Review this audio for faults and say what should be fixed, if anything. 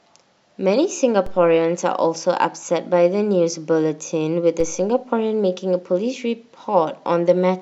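Two DC steps occur, at 1.26 s and 4.60 s. Each time the waveform's zero line jumps by about -22 dBFS. This gives a low thump while the speech continues. The offset then decays through a 2 Hz high-pass. Prevent this by settling or recalibrating the converter before recording, or by keeping offset-carrying inputs out of the live path.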